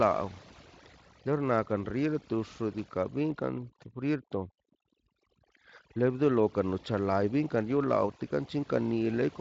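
Speech runs through overdone noise removal for the whole clip: the background drops and breaks up into twinkling specks, as the quieter parts of the voice are switched off along with the noise. The Speex path here does only light damage, with nothing above 7.6 kHz.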